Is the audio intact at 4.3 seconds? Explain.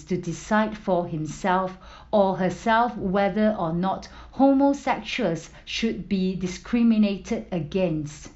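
Yes, the speech at 4.3 seconds is intact, with no dropout, click, distortion or other fault at that moment.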